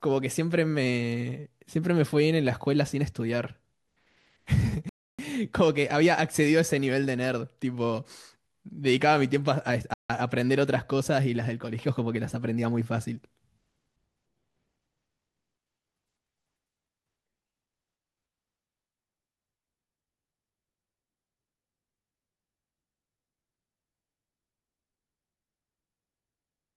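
Speech with two Bluetooth stalls, silent gaps at 4.89–5.19 s and 9.94–10.10 s, likely interference starving the playback buffer; the sound resumes unchanged, unlike a crackling dropout.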